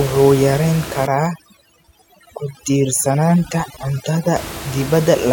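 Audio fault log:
1.07–4.36 s, overdone noise removal: the room noise, about 13 dB below the speech outside this span, drops and breaks up into scattered twinkling specks. Frequency bands near the suppressor's noise estimate are clamped far down or off, taking quieter speech detail with them. Unlike codec warble, which clings to the speech itself, these artefacts follow the noise floor and stop once the steady background returns after 4.36 s.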